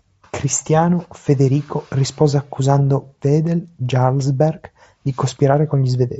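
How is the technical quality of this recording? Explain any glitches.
The speech arrives intact over a Bluetooth mSBC headset link, carrying only the wideband band limit and light coding texture of that path, with no glitches to explain.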